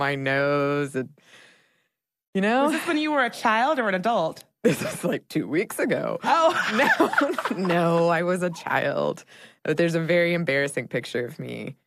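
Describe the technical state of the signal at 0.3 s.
At 0.3 s the speech signal is intact, with no technical fault present at that moment.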